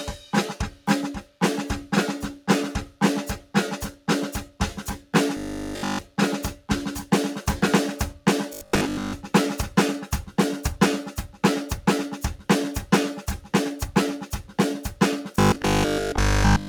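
A noise suppressor built for speech has been left on this music for its whole length. It treats sustained tones and ambience as noise and pulls them down, with the level swinging by around 10 dB. Attacks get through. Held sound and decay tails sink. The result is a pumping, thinned-out texture that never settles.

The sound is cut by the noise suppressor at 0.17, 0.70, 1.21, 2.86, 3.39, 3.91, 4.45 and 4.98 s. Each dip lasts about 150 to 200 ms. The first drops by about 8 dB. The rest drop by about 11 dB. The sustained parts of the sound are what sink here. The music audibly ducks and recovers in a flutter.

Robotic sound from repeated short buffers follows, from 5.37 to 6.03 s, from 8.53 to 9.13 s, and from 15.36 to 16.68 s. A rigid 50 Hz buzz runs through the music and gives it a metallic, machine-like tone. In the first stretch almost all of the sound is affected. In the later two, most of it is. 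This is likely late-arriving audio being covered by looping the last fragment, which fits a 20 ms buffer.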